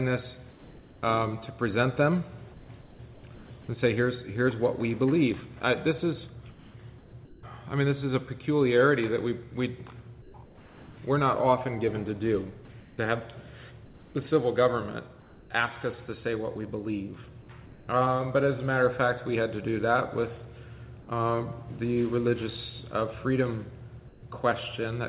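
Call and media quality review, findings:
Comfort noise in place of the background, likely discontinuous transmission: sender goes silent in pauses, receiver synthesises filler. Real background becomes smoother noise of a different tone; at 0.5, 17.66 and 24.08 s it sits about 24 to 25 dB below peaks and the filler is about 4 dB quieter (about 8 dB at 24.08 s). At 0.5–1.01, 2.54–3.5, 6.5–7.43, 10.22–10.97, 12.8–15.5, 17.66–17.87, 24.08–24.23 s.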